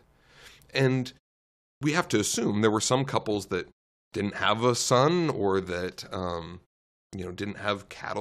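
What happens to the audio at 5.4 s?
At 5.4 s the speech plays through intact, with no dropout, glitch or distortion at that moment.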